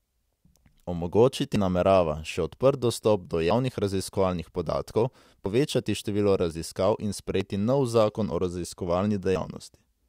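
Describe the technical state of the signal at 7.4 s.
At 7.41 s the speech jumps abruptly forward: roughly a twentieth of a second of audio is simply gone, and the material on either side is butted together with no gap of silence, so the flow lurches rather than pausing. This is audio missing between chunks, likely caused by the recorder or processor handling the signal in 2-second blocks and dropping a short slice while closing one block and starting the next.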